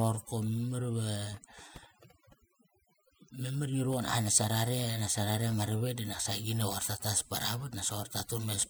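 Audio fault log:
Throughout: overdone noise removal. A noise reduction stage was set too aggressively on a noisy speech recording. Wherever a frequency band sits close to the tool's noise estimate, it is pulled right down or switched off. The quiet edges of the voice are caught too and removed along with the noise. Between phrases the background drops, broken by small twinkling specks.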